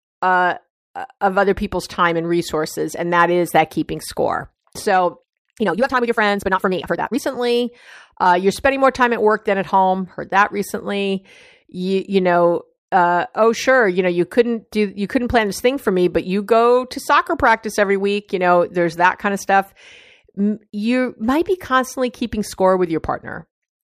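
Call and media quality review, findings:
Time-stretched section, 5.17 to 7.21 s: speech suddenly rushes at roughly double pace (about 1.99x), pitch unchanged, then normal pace resumes. Likely cause: time-scale processing in the playout or jitter-buffer stage squeezing the segment to fit a shorter slot, dropping short pieces to hold pitch.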